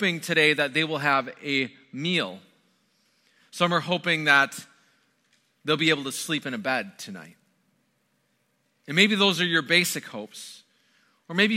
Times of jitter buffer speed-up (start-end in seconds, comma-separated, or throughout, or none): none